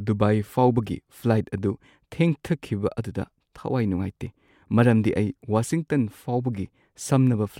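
Nothing in the speech stood out as a technical fault on listening.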